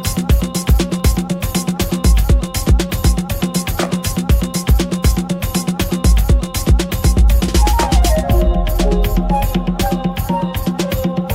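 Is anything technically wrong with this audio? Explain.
Yes. From 1.00 s to 10.85 s, a click recurs every 0.99 s, about ten in all, likely clock drift buffer slips: a roughly 200 ppm clock mismatch drops or repeats a few samples per slip. The strict regularity distinguishes it from random dropouts.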